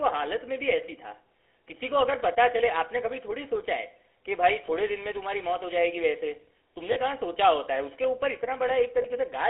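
Throughout this speech clip the GSM full-rate codec is plainly audible. The voice is confined to a telephone band of roughly 300 Hz to 3.4 kHz and has a buzzy, gravelly roughness. That roughness comes from the codec rebuilding the sound from a vocal-tract model driven by a sparse, regularly spaced pulse excitation, which fits the 13 kbps full-rate codec. The pulse grain is what separates it from simple band-limiting or a narrowband line, which would sound muffled but smooth. The clip also has lost GSM frames at about 4.66 s, 6.92 to 6.97 s and 9.02 to 9.06 s. The first and last gaps are about 20 ms long and the middle one about 40 ms, which points to one, two and one missing frames. At each point the decoder repeats the last good frame. The result is a brief metallic, ringing hold rather than a silent dropout or a click, and that is how it differs from ordinary packet loss with muting.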